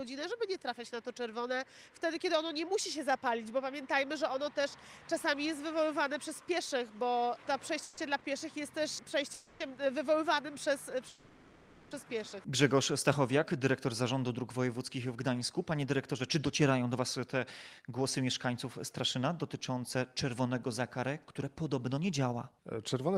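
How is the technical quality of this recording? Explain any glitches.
The recording has network playback faults: three freezes, one brief stall, and two stretches where the audio runs fast.

Call audio freezes at 7.83–7.99 s, 9.34–9.62 s and 11.08–11.93 s: the last sound hangs as a fading buzz or hiss for 140, 260 and 830 ms, then resumes unchanged. The likely cause is delayed packets emptying the jitter buffer.

Short stall from a late packet at 8.19–8.23 s: a sound is held about 20 ms too long with a slight buzz or dip, because the receiver stretched it while awaiting the packet.

Jitter buffer speed-up at 15.06–17.37 s and 17.79–23.16 s: the audio runs 7% fast at unchanged pitch and sounds hurried, as tiny pitch-period slices are trimmed. This removes roughly 0.2 s and 0.4 s of accumulated delay.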